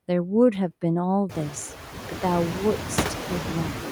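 Noise suppressor artifacts run throughout this speech: frame-by-frame band gating lowers the noise floor by about 4 dB, so a spectrogram shows it sinking between words and rising under them, while room noise climbs around 1.5 s.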